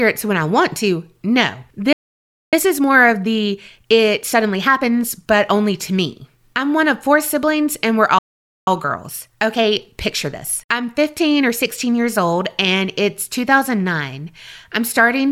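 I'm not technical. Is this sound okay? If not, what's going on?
No. Twice the speech cuts out into silence mid-sentence: from 1.93 to 2.53 s, about 0.6 s, and from 8.18 to 8.67 s, about half a second, right after "four siblings and we're". This is a playback stall. The player likely ran short of incoming audio and paused until more arrived.

After each gap the talking sounds hurried but keeps its normal pitch. This is time-compressed catch-up. The player snips out tiny slices to make up lost time, running 1.15 times faster from 2.53 to 5.53 s, just before "to me I'm one", and 1.1 times faster from 8.67 to 11.67 s, just before "years old and it's".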